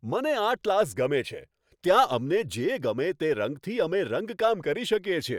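Nothing stood out as a technical fault on listening to this speech recording.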